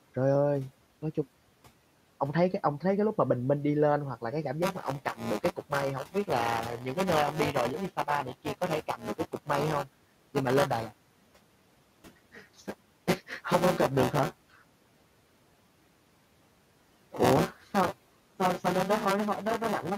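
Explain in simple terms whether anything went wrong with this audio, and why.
Two things went wrong, both in the playback and processing chain.

From 4.62 s until the end, there is buffer tearing. The program filling the audio buffer and the hardware playing it have drifted out of step. About a fifth of each chunk holds sound from a moment earlier, with abrupt joins on either side. Because that happens 200 times a second, the speech picks up a robotic buzz or rattle. Unlike electrical hum, the buzz stops in pauses and is heard only when sound is playing.

Between 8.97 and 9.49 s, there is speech cut by the noise suppressor. The suppressor mistook bits of the speech for background noise and turned them down along with it, for a total of only a fraction of a second. Soft sounds and word edges come out swallowed and faint. A dropout would leave a gap of silence, but here the speech is merely dimmed. 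The quiet room noise underneath is dimmed together with it.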